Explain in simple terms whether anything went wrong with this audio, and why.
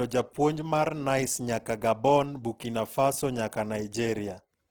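The speech sounds grainy and rough from start to finish. The likely cause is Opus compression, which fills squeezed detail with noise instead of keeping it clean.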